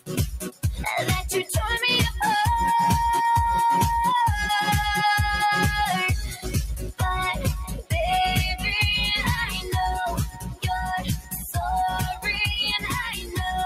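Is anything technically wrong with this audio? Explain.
Yes. A noise suppressor applied to music or sounds runs throughout. A speech-tuned suppressor treats sustained material as noise, so level swings by roughly 10 dB; the waveform envelope visibly breathes.

Sound cut by the noise suppressor occurs at 0.37–0.64 s, 6.29–6.48 s, 7.69–7.92 s, 10.27–10.66 s, 10.99–11.57 s, 12.11–12.26 s and 12.80–13.39 s. Held tones sink, by about 18 dB at deepest, leaving dark gaps on the spectrogram and shortened tails.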